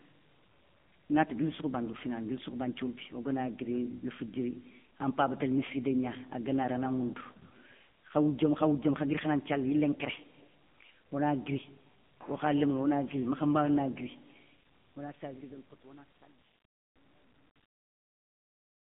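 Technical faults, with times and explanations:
Throughout, AMR narrowband mobile codec: heavy buzzy, synthetic coloration with nothing above 3.6 kHz and a 150 Hz to 3.5 kHz line band, fitting a low 6.7 kbit/s mode.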